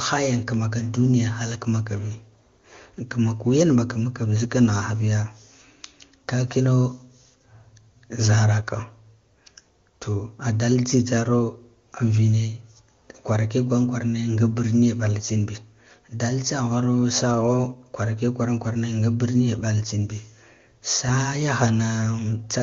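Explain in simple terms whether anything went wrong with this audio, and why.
Nothing went wrong with this speech recording. It was carried through an AMR wideband (HD Voice) codec running at its top quality setting, so any traces that coding leaves on the sound are faint at most.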